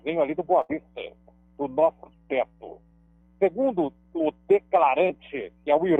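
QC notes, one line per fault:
0.61–0.71 s burst of packet loss: a run of audio failed to arrive in time, so the receiver stretched the last received sound across roughly 75 ms while fading it down, then resumed about 80 ms further along, leaving that stretch of sound missing.
2.14–3.21 s drift correction step: playback slows by about 5.9% and pitch drops by about 105 cents, roughly a semitone flat, for just over a second before snapping back, likely clock-matching software altering the playback rate in one step to rebalance its buffer.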